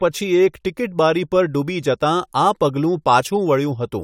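Nothing is technically wrong with this speech recording.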